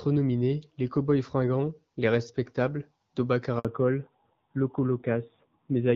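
A speech recording carried over a phone call, heard first through the AMR wideband (HD Voice) codec with only light coding damage and a clarity that fits its 12.65 kbit/s mode. At 3.59 s there is a handover gap: while the call switches networks, no speech frames arrive, so the sound fades out within a few tens of milliseconds and stays silent for 60 ms until the new link picks up at 3.65 s. On a waveform this shows as a short flat stretch cutting into the speech envelope. A spectrogram shows it as a thin vertical blank band across all frequencies. Whatever was said in that window is gone. From 3.65 s to the end the call falls back to narrowband. The upper band disappears, the sound becomes duller and rougher, and this fits a drop to AMR-NB at around 7.4 kbit/s. On a spectrogram the energy that previously reached past 6 kHz now stops at a hard horizontal ceiling at 4 kHz, with nothing above it for the remaining 2.3 s.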